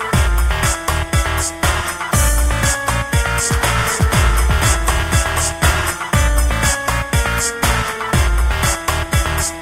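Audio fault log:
3.79 to 5.91 s, doubled audio track. A second full-band copy of the sound runs about half a second behind the first, a few decibels quieter, roughly 5 dB down. It carries no decay or room colour, so it reads as a flat repeat rather than an echo. It appears and vanishes abruptly at those edges. This is likely a second capture through a slower path, or an edit leaving two copies out of step.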